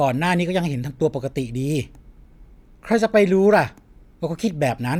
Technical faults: none

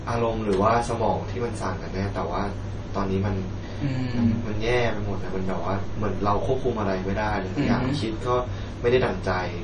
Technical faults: MP3 compression; DC step

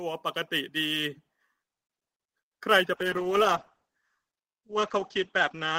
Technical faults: sample clock jitter; call bitrate drop

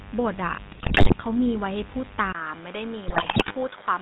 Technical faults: mains buzz; GSM full-rate codec; GSM bit errors; input switched to a poorer device

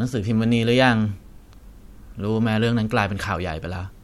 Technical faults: none

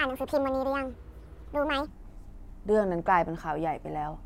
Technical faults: section at the wrong speed

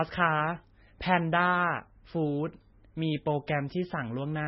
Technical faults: MP3 compression

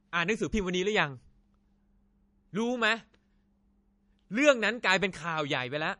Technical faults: low-bitrate audio saved at a high bitrate

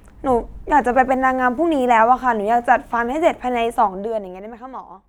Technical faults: video or display buzz; zipper noise

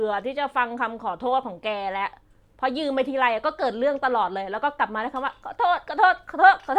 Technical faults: none

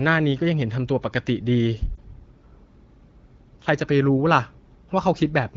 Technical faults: lost AMR speech frames

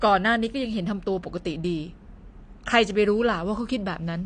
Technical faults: AAC compression

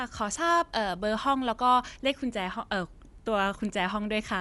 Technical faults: Dolby Digital compression

